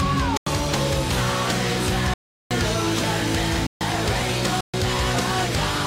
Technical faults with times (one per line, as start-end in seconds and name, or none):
0.37-0.46 block of digital silence
2.14-2.51 block of digital silence
3.67-3.81 block of digital silence
4.61-4.74 block of digital silence